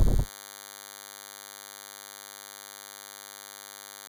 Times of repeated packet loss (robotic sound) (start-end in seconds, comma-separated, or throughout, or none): none